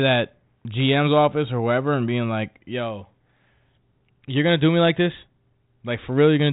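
Speech, with no technical faults to report.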